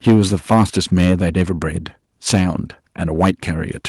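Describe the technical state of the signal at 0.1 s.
At 0.1 s you're inside a stretch of microphone overload running from 0.07 to 1.13 s: peaks push about 8 dB past the converter's ceiling, likely from input gain set too high, so tops get sheared off and the loud syllables crackle harshly. Right at 0.09 s there's also a microphone volume stepped down, an abrupt drop of about 2 dB in voice and background, likely the call software cutting input gain after detecting clipping.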